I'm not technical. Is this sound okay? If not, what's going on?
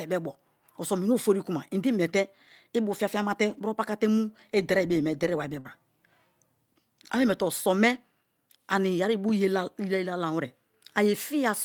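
No. Around 3.49 to 3.59 s, just after "imete ibu fiafia me", the speech turns briefly rough and noisy without stopping. That's a lost packet rebuilt from error correction: a later packet carried a cruder backup copy.

At 5.59 to 5.80 s, after "bo ye me deriware", the sound holds and fades, then jumps ahead. This burst of packet loss dropped about 60 ms of speech.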